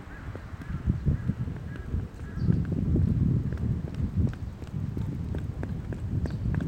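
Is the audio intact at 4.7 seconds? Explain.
Yes, the audio is intact at 4.7 seconds, with no fault audible at that point.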